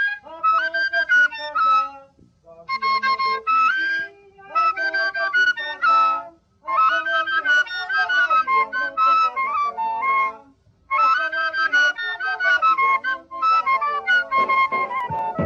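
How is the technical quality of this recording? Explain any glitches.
Nothing in the recording stood out as a technical problem on listening, so there are no glitches to explain.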